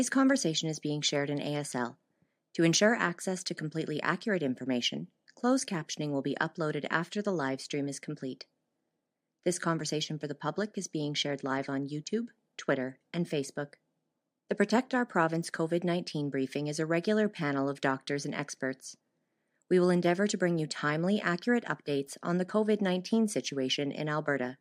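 Nothing goes wrong anywhere in this stretch of speech, so there are no technical faults to point out.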